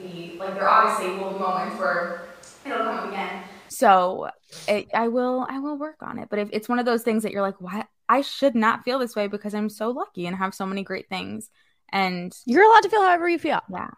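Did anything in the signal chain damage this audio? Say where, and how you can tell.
Yes. Switch to a distant microphone at capture, 0 to 3.68 s: roomy, thin speech about 5 dB quieter with noise about 25 dB below, likely a failed close mic.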